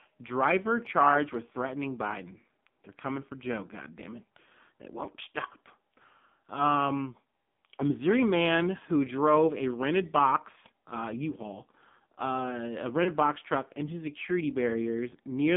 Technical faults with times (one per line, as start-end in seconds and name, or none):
0.00-15.57 AMR narrowband mobile codec
13.04-13.10 lost AMR speech frames